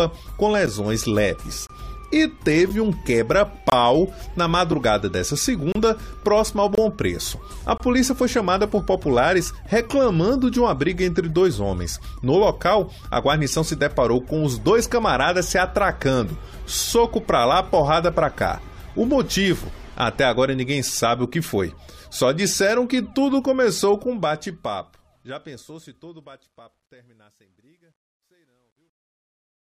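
Gaps between stream segments break the sound at 0.66, 1.67, 2.69, 3.70, 4.72, 5.72, 6.75 and 7.78 s, one roughly every second, which points to a stream cut into 1-second segments. At each join the time stamps leave a small hole that the player fills with silence, so the audio drops out abruptly with hard edges for between about 5 and 30 ms. Nothing is missing from the material; the gaps only push it later.

Truncation distortion on a fade begins at 23.90 s and lasts to the end. The fade-out, which starts around 24 s and runs to the end, is computed with too few bits and no dither; the graininess fits roughly 11-bit resolution. As the level sinks toward the smallest step, the waveform collapses into coarse square steps, so the tail turns gritty, worst from 26.36 s onward.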